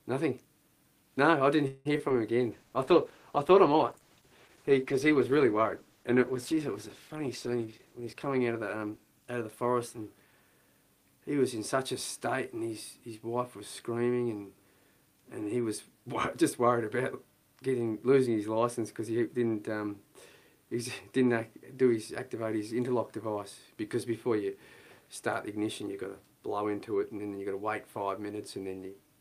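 From 1.67 to 2.12 s there is repeated packet loss with a robotic sound. Four gaps fall in under half a second, the longest 178 ms. The receiver fills about 206 ms by extending the previous sound, and roughly 60 ms is simply missing, so the passage turns choppy and robotic.

Just after, from 2.39 to 2.70 s, a jitter buffer slow-down stretches the audio to 91% speed. The receiver repeats short pitch-period segments to rebuild its reserve, adding 36 ms, so sounds drag while pitch stays unchanged.

A call bitrate drop starts at 2.53 s and lasts until 11.37 s. The encoder's rate falls from 48 kbps to 13 kbps and stays at the bottom for about 5.4 s. Coarser coding at that rate leaves the audio rough and dull, with the upper frequencies trimmed away.

Inside that stretch, from 7.57 to 8.99 s, a jitter buffer speed-up runs the audio at 113%. The buffer had grown beyond its target, so the receiver cut out short pitch-period pieces totalling roughly 0.2 s, and the sound comes across hurried at normal pitch.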